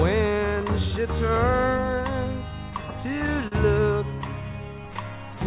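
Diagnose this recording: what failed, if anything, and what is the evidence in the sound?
Clock drift between sender and receiver: the sending device's audio clock runs about four percent slow against the receiver's. The jitter buffer keeps draining, so the receiver must pad the stream to keep playing, and the whole clip drags slightly behind true tempo.

Repeated timing corrections in the receive-side buffer run from 0.29 s to 5.36 s, playing at 97% speed. Small repeated slices add roughly 150 ms overall, unevenly spaced, heard as a faintly unsteady, hesitant pace rather than distinct glitches.

A short stall from a late packet at 3.47–3.55 s occurs when the jitter buffer ran empty. The receiver held the last sound for 43 ms until data arrived, then resumed without loss, leaving a brief smeared, slightly buzzy hold. The G.711 mu-law path carries nothing above 4 kHz.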